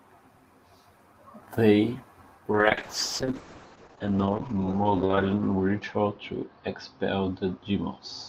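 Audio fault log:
2.52–8.29 s: call bitrate drop. From 2.52 s to the end of the clip the speech turns coarse and watery, and the top end is sharply curtailed, with the audible band narrowing from about 20 kHz to about 8 kHz. The call's bandwidth estimate fell and the encoder was told to spend far fewer bits, which fits a fall from roughly 32 kbps to 7 kbps. The roughest stretch lasts about 2.7 s, and quality never recovers before the clip ends.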